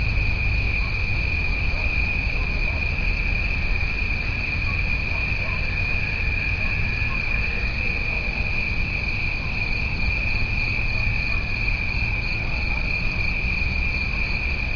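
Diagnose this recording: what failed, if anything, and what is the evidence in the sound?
No audible faults anywhere.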